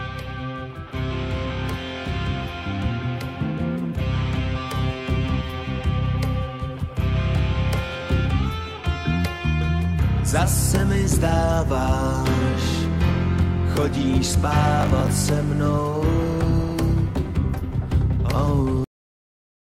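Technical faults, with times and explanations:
14.81–15.09 s, processor overload crackle: for just under a third of a second the sound turns gritty and torn, as the processor falls behind and misses a run of deadlines in a row. Each missed buffer replays a short piece of old audio with hard edges, and the spacing of the repeats fits buffers of around 10 ms, something like ten of them in succession. On a waveform this shows as a row of small steps and repeated fragments; a spectrogram shows thin vertical broadband streaks at each seam, stopping once the load eases.
18.84 s, cut-off end: the audio stops mid-sound and drops straight to digital silence, with no decay or fade, because the final buffers were never written or played. A waveform shows the trace ending abruptly mid-sound and then a flat line to the end; a spectrogram shows the content stopping abruptly, followed by an empty region.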